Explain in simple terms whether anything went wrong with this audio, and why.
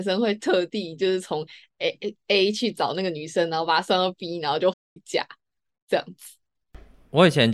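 The speech goes silent from 4.73 to 4.97 s, a playback stall. The player likely ran out of data briefly, then resumed.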